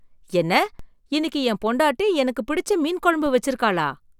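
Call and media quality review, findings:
DC step at 0.79 s and 3.26 s: zero line of the speech waveform jumps by about -27 dBFS, then relaxes back through a 5 Hz high-pass. Probable converter recalibration or offset input switched in. Heard as a brief low thump each time, speech continuing unaffected.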